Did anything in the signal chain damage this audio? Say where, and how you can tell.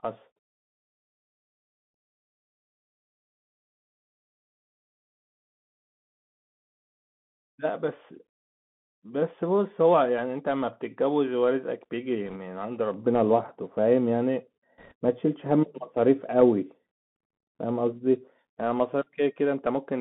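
Yes. Throughout, the speech sounds narrow and scratchy, cut off above 3.5 kHz, with granular hiss: the Bluetooth CVSD headset codec, whose one-bit adaptive steps lag sharp sounds.

From 12.27 to 12.37 s and 14.78 to 14.93 s a brief rushing crackle appears, with no sharp clicks: bit errors on the Bluetooth voice link, a couple of percent of bits flipped in transit.

From 12.94 to 18.39 s the sound turns dull and muffled, falling about 11 dB at 10 kHz: de-emphasis applied wrongly during processing, cutting treble that was never boosted.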